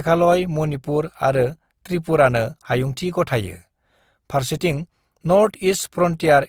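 Throughout, the speech sounds rough and grainy, likely from Opus compression near 24 kbps. A spectrogram shows upper bands filled with noisy, smeared texture rather than clean harmonics.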